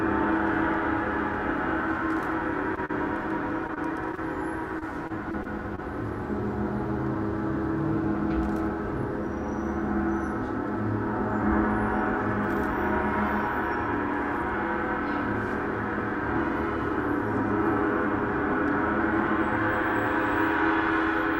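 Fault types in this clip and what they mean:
Short stall from a late packet: a packet turned up late around 2.75 s, so the receiver held the last sound for 20 ms, then carried on with nothing lost.
Short concealed packet loss: at 2.85 to 2.91 s, 20 ms never arrived; the receiver extended the previous sound across the gap, giving a brief smear before blending back.
Repeated packet loss (robotic sound): packets kept dropping at 3.67 to 4.19 s and 4.79 to 5.80 s, gaps up to 25 ms, patched repeatedly, so the sound turns choppy with pieces missing.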